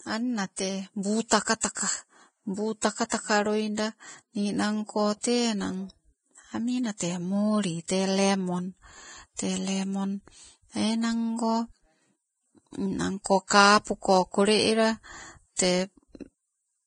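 Throughout, the speech carries heavy codec damage, likely from Vorbis compression at a rate around 21 kbps: nothing remains above 9.7 kHz, and the coarsely quantised treble turns into hiss and grain, roughening tones and blurring attacks.

Pre-echo occurs at 2.81 s (about 19 ms), at 7.88 s (18 ms, just before "tee lemon") and from 13.47 to 13.51 s (31 ms, before "kapuko kole ela"). At each point, quantisation noise spread across a transform block leaks ahead of a sharp attack as a short hiss.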